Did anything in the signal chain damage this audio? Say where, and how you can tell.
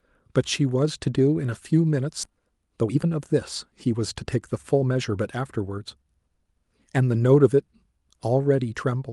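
Yes. Skip ahead at 2.23 to 2.25 s, in the network and jitter-buffer stage: the speech jumps forward with no filler, joining two points roughly one and a half seconds apart. Queued audio was dropped, either in transit or by the buffer when it overflowed, while later speech was already waiting.

Jitter buffer speed-up from 2.27 to 5.44 s, also in the buffer stage: the speech runs at about 113% of normal speed with unchanged pitch and sounds hurried. To shed excess delay, the receiver repeatedly cut short pitch-period slices, removing about 0.4 seconds in total.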